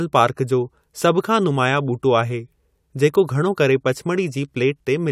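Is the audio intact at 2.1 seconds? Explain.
Yes, the speech at 2.1 seconds is intact, with no dropout, click or other fault at that moment.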